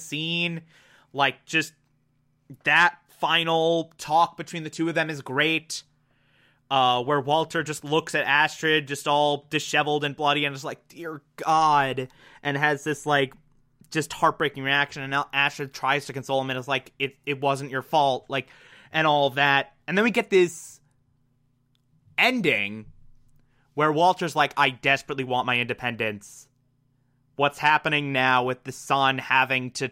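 No faults found in this speech recording; nothing to flag.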